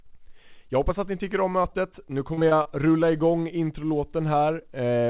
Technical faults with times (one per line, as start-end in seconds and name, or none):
1.62-1.74 short concealed packet loss
2.34-2.67 repeated packet loss (robotic sound)